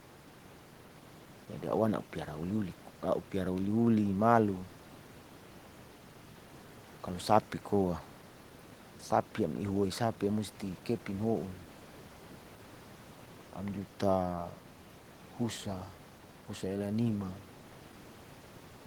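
A speech recording with nothing technically wrong with it at any point.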